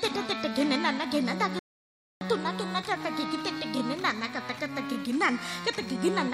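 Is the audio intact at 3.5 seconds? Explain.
Yes, the audio is intact at 3.5 seconds, with no fault audible at that point.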